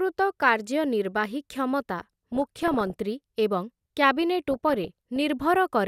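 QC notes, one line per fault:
1.99–2.93 s, DAB burbling: bit errors corrupt MP2 sub-band data, so isolated bands flare and squelch; a spectrogram shows scattered short rectangular blocks.
4.51–5.21 s, DAB burbling: a slightly milder recurrence of the corrupted scale factors and samples gives a bubbling chirp, seen as patchy frame-length band bursts.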